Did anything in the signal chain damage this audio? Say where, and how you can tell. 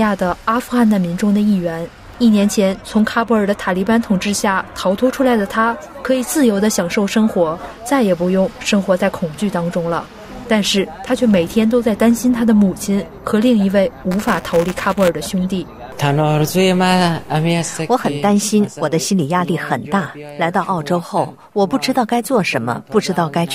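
Yes, at the driver/buffer stage. From 14.11 to 15.1 s there's a robotic 200 Hz buzz riding on the sound, which is classic buffer tearing. Writer and reader have slipped, so each 5 ms period carries a small slice of stale audio about 10 ms old, hard-spliced in.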